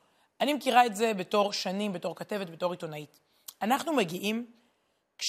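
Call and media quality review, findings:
No audible faults found on the speech; no component flagged, no action required.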